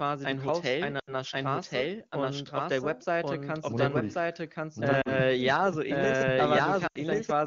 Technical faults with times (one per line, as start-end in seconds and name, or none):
0.00-7.46 doubled audio track
0.99-1.14 lost AMR speech frames
5.01-5.12 lost AMR speech frames
6.87-6.98 lost AMR speech frames